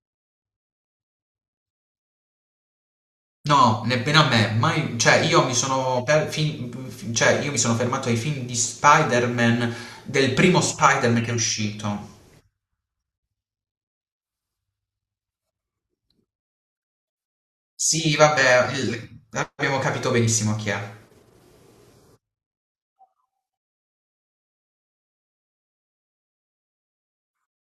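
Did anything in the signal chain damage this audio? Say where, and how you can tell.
No, nothing in the signal chain damaged this audio.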